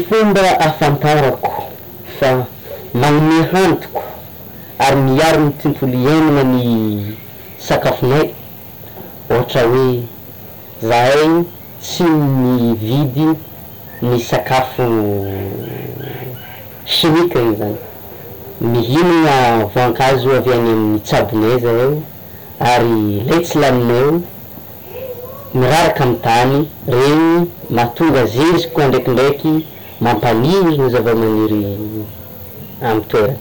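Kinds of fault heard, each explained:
Hard clipping: speech driven about 27 dB past full scale, roughly a fifth of samples flattened, giving harsh fuzz on all loud syllables rather than occasional peak crackle.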